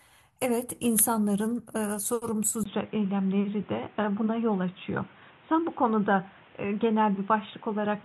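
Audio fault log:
2.64 s to 8.05 s, input switched to a poorer device: after a brief silence of about 20 ms, the speech loses everything above 3.8 kHz and turns dull and boxy, with a new background noise sitting roughly 30 dB below the signal while loudness stays about the same. This is likely a mid-recording change to a narrower-band microphone or a headset call profile, whose limited bandwidth and own noise floor persist to the end.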